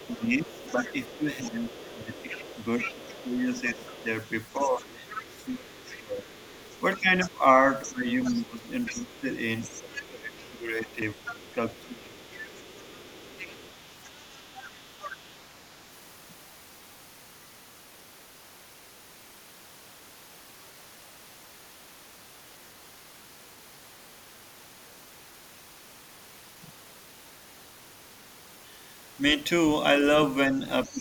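From the start to 15.3 s, a second, fainter voice sits about 15 dB below the main speech. This is the other side's voice leaking through, likely loudspeaker echo the canceller failed to remove. Unlike background noise, it is a distinct second voice.

From 0.15 s to 12.2 s, the main speech dips by up to about 15 dB, for around seven seconds in total. This is speech suppressed in double talk, likely the canceller turning both voices down at once.

At 3.57 s and 11.02 s the audio jumps ahead, losing roughly 10 ms and 20 ms. This is a dropped buffer (overrun), likely samples overwritten before being read. There is no silent gap, which separates it from a dropout.

From 30.52 s to the end, the speech dips again, less deeply, by about 10 dB. From 30.85 s, the leaking voice returns at about 20 dB below the speech.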